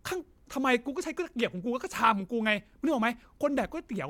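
Listening through the speech, nothing stood out as a technical fault at any point.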